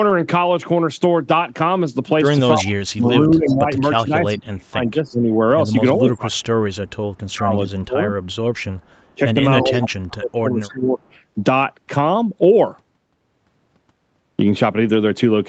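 From 2.56 to 8.16 s the speech dips and breaks up for about 3 s in total, falling by up to about 25 dB. This is speech suppressed in double talk, likely an echo canceller turning its own talker down while the far side also spoke. The waveform shows the envelope collapsing in chunks, and the spectrogram shows gaps with the upper harmonics thinning first.

A faint echo leak follows, a copy of the voice 329 ms late, at 3.46 to 3.56 s (about 20 dB below the speech) and 6.39 to 7.17 s (about 40 dB below). It is likely echo the canceller failed to remove. On a spectrogram it shows as ghost harmonic traces shifted a third of a second to the right.

A longer echo leak runs from 8.24 to 11.06 s at about 25 dB down. Inside it, from 9.14 to 10.99 s, suppression in double talk returns and cuts the speech by up to about 30 dB for roughly 1.5 s in total. There the waveform shows deep notches beside the ghosting.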